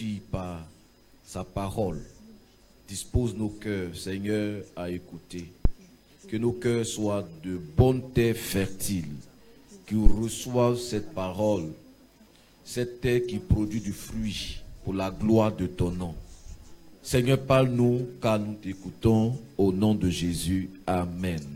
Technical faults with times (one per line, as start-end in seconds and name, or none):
5.65-5.74 phantom power thump
10.06-10.16 phantom power thump